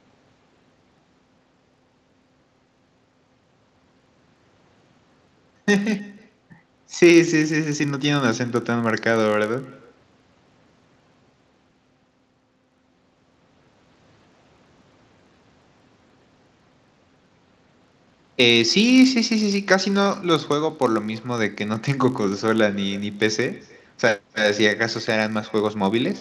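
From the start to the end, each phrase is trailed by an echo with no canceller. The far end's loudspeaker feeds its microphone, and nothing removes that pickup. A faint, thin copy returns roughly a third of a second later, about 26 dB below the speech.

Also running through the whole clip is a filter restarted on every block. It loses its state at each block boundary and starts again from silence. Each restart leaves a small click. These merge into a 50 Hz buzz, which points to 20 ms blocks. The buzz rises and falls with the speech level, within a band that stops at 8 kHz.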